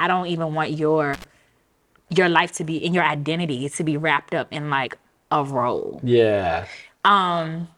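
Just after "don't even want", at about 1.13 to 1.24 s, an intermittent contact briefly opens the signal path for roughly 70 ms. The audio drops out with crackle at both edges. The waveform shows a near-flat gap framed by sharp spikes, and the spectrogram shows a dark band bounded by broadband vertical lines.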